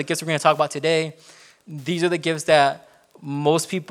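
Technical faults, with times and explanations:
Throughout, Wi-Fi interference: a faint steady ticking sits around 40 dB below the speech, repeating every 102.4 ms, just under ten times a second. A nearby Wi-Fi radio's beacon transmissions are being picked up and rectified by the audio circuitry, turning each radio burst into an audible click.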